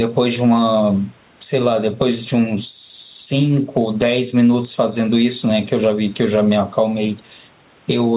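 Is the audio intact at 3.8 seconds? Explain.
No. Gain pumping runs throughout, including 3.8 s: the sound is squashed, with loud and soft parts closer in level and the gain swinging by around 10 dB under louder speech, likely from excessive gain driving a fast limiter.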